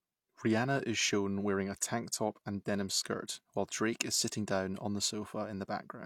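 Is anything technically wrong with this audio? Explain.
Yes. From about 3.85 s to the end of the speech, there is sample clock jitter. The converter's timing wanders by something under a microsecond, so each sample lands a little early or late, and the error scales with how fast the waveform is changing. The result is an added hiss and roughness sitting roughly 35 dB below the speech, strongest on loud and bright sounds such as sibilants and absent in the pauses.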